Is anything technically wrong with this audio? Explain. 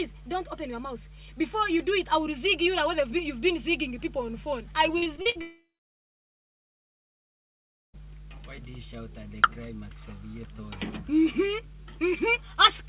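Yes, three faults are audible, heard through a narrowband call path whose 4 kHz ceiling fits G.711 A-law at 64 kbps.

Mains hum runs throughout: a steady 50 Hz tone about 20 dB below the sound, from power-line coupling such as a ground loop. On a spectrogram it is a thin, unbroken horizontal line at 50 Hz, with weaker low harmonics stacked above it.

Repeated packet loss (robotic sound) occurs from 4.98 to 5.37 s. Five gaps, the longest 57 ms, were each patched by extending the last sound, covering about 44% of that stretch. The result is choppy. The spectrogram shows smeared, repeated slices instead of natural movement.

A long network dropout follows from 5.41 to 7.95 s, likely caused by audio arriving late or not at all. A brief fading buzz gives way to about 2.3 s of near-silence, shown as a flat waveform and a blank spectrogram, before the sound resumes with that portion missing.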